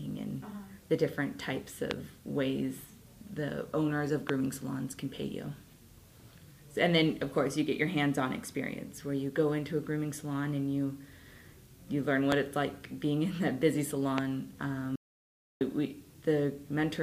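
You've got four loud pops in here, at 1.91, 4.29, 12.32 and 14.18 s. Each is a single sharp click lasting about 20 ms and peaking roughly 20 dB above the surrounding sound, which keeps running underneath. That's the signature of a sudden voltage step getting into the chain, likely from a plug, a switch, static or a driver hiccup, with the downstream circuitry shaping it into a quick pulse. Then there's an audio dropout to silence from 14.96 to 15.61 s, a gap of about 0.65 s. The sound just stops mid-flow and comes back, and the gap is silent with no room tone at all. That points to the input being lost while the recorder kept writing, likely a momentary disconnect, a failed link or a stray mute. Whatever happened in that window is simply gone.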